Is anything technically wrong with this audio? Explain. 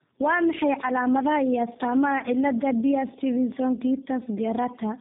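Yes. Tandem speech coding runs through the whole clip. The sound appears to have been squeezed through two low-rate speech codecs in sequence, with the second coding the first's already damaged output. Nothing reaches above 3.7 kHz, and the result sounds rough, muffled and warbly, which fits an AMR-NB to G.729A chain.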